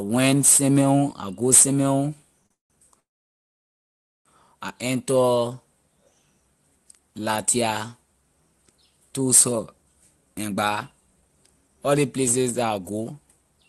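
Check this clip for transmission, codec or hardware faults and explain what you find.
Yes, there are real transmission faults here: a brief stall, two freezes right after it, and a hurried stretch near the end. The call codec itself is audible only as the usual mild coding texture, with the top end stopping around 12 kHz.

Short stall from a late packet, 2.46 to 2.52 s: a packet turned up late, the jitter buffer briefly ran dry, and the receiver held the last sound for about 39 ms before carrying on from the same spot. You hear a slightly drawn-out moment, with nothing lost.

Call audio freeze, 2.52 to 2.72 s and 3.00 to 4.27 s: these were likely caused by packets held up in transit, so the buffer emptied again. The last sound trails off and drops to silence, about 140 ms the first time and about 1.22 s the second. The audio then resumes where it stopped, so the gaps are inserted and no content is missing.

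Jitter buffer speed-up, 10.48 to 13.65 s: the buffer was holding more audio than it aims for. The receiver trimmed tiny pitch-period slices over and over, around 0.4 s in total. Speech runs about 12% fast at unchanged pitch and sounds noticeably rushed.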